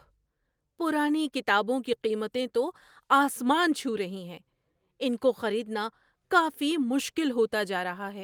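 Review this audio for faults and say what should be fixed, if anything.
No technical faults turn up anywhere in the recording. Nothing needs to be fixed.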